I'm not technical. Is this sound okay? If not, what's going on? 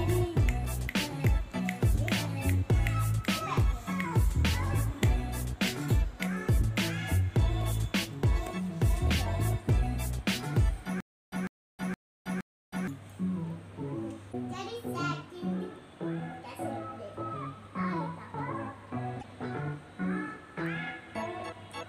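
No. From 11.0 to 12.9 s there is a stutter with silent gaps. The same 150 ms scrap of sound plays four times, each followed by about a third of a second of dead silence, repeating every 0.47 s. The likely cause is playback stalling and retrying. Unlike a glitch, it is evenly timed, and whatever should have played there is lost.

At 14.29 to 14.35 s and 19.19 to 19.24 s there is damaged data in a compressed stream. Each is a single brief chirp or blip about 50 ms long, where the decoder misread broken data. Unlike the stutter, nothing repeats.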